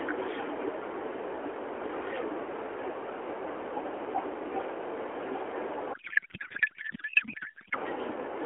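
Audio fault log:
5.94–7.76 s, codec payload misread: for nearly two seconds the speech gives way to garbled noise and warble that barely tracks it, while the narrowband AMR mobile codec carrying the call shows only light damage elsewhere in its 300–3400 Hz band. The decoder is taking well-formed frames but finding their fields in the wrong places, which points to octet-aligned AMR packing being read as bandwidth-efficient, until sender and receiver agree on the format again.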